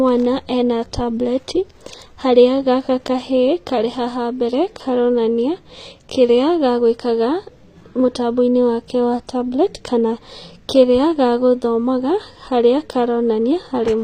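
From start to finish the top end sounds bright but synthetic. The s sounds come out gritty and lispy, and nothing gets through above about 15.4 kHz. That's likely HE-AAC compression, the v2 flavour, at a rate that fits roughly 24 kbps. The codec keeps only the lower spectrum and fakes the treble by copying lower bands upward under a coarse envelope, so the high harmonics don't line up with what's underneath.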